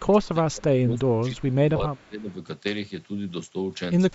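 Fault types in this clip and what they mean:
Speech suppressed in double talk: the speech dips sharply, by about 25 dB in the opening stretch to 0.66 s and about 20 dB from 0.86 to 2.3 s, sounding ducked and partly cut away. The likely cause is an echo canceller mistaking simultaneous talk for loudspeaker echo and attenuating everything.
Echo leak: a faint, delayed copy of the speech surfaces briefly around 1.39 to 1.54 s and again near 2.0 s, roughly 283 ms behind and about 40 dB down. It is likely loudspeaker pickup at the far end that the echo canceller failed to fully remove and sent back.
Lost LE Audio frames: a brief noisy smear replaces the sound for 30 ms at 1.77 s, the tonal detail turning to hiss. Three consecutive Bluetooth LE Audio frames went missing, and the LC3 decoder filled them by repeating the last spectrum with randomised signs.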